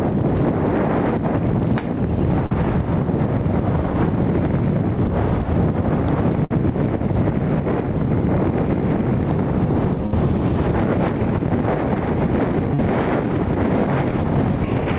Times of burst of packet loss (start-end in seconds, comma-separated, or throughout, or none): 6.45-6.52, 10.06-10.14